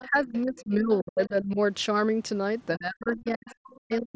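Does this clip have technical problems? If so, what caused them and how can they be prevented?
Yes. A faint second voice sits under the speech from 0.00 to 0.61 s, again from 0.96 to 1.28 s, and from 3.14 to 3.78 s, at roughly 25, 35 and 30 dB below the main talker. This is other side's voice leaking through, likely because the talker's device played the far end on a loudspeaker and its echo canceller left part of that signal in the microphone pickup. Using a headset, or lowering speaker volume so the canceller can track the echo path, prevents it.

The main voice also sinks from 0.07 to 1.59 s, dropping by up to about 25 dB, and from 2.76 s to the end, dropping by up to about 40 dB. In each stretch roughly a second is affected. This is speech suppressed in double talk, likely because the echo canceller heard both sides at once, could not tell the near talker from the echo, and turned everything down. 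A headset or a canceller with better double-talk detection avoids it.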